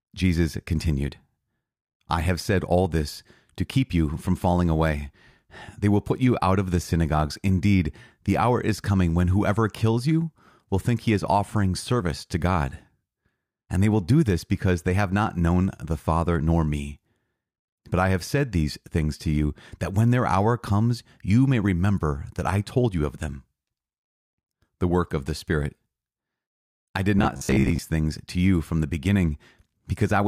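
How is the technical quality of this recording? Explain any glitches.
There's one clear glitch, near the end. From 27.19 to 27.79 s, right after "I did" and before "things to you from", the speech goes robotic from repeated short buffers. It sounds like a rigid, metallic 66.7 Hz buzz that only loosely tracks the talking. The likely cause is new audio arriving too rarely, so the playback keeps looping a roughly 15 ms chunk and skips about half of the real material.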